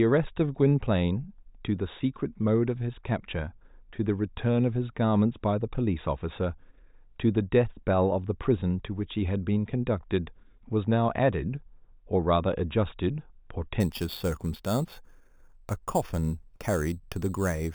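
From 13.80 s to the end at 17.74 s, the speech shows imaging from sample-and-hold upsampling: each sample was simply held, which fits an 8 kHz original rate, with no smoothing filter. Mirrored spectra land in the 4 to 8 kHz band at about -18 dB, adding a metallic fizz that tracks the speech.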